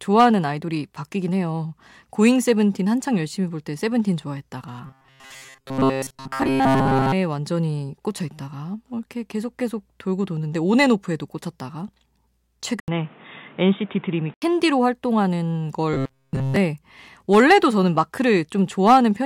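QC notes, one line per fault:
4.86–7.14 s, robotic sound from repeated short buffers: speech becomes a rigid metallic buzz at 134 Hz with most of the real audio skipped, likely from a roughly 7.5 ms buffer being replayed while new audio arrived late.
12.8–14.42 s, input switched to a poorer device: an 80 ms silence, then dull, narrowed sound and new noise about 30 dB down at an unchanged level, likely from a mid-recording change to a lesser microphone.
15.93–16.56 s, robotic sound from repeated short buffers: the same 134 Hz buzz returns, now fully replacing the speech, likely the same roughly 7.5 ms buffer looping when no fresh audio arrives.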